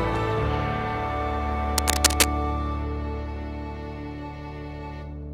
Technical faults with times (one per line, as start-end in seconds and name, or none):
1.78-2.26 cable scratch noise